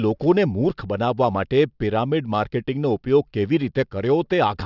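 Aliasing runs through the whole speech clip. The rate was cut without a proper anti-alias filter, consistent with a drop from 48 kHz to 12 kHz, so content above 6 kHz folds back down as unrelated tones about 35 dB under the signal, making sibilants gritty and metallic.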